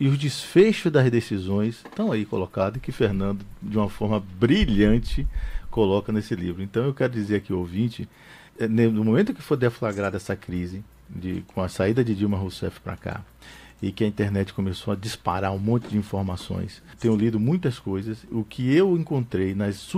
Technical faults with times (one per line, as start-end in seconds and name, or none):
none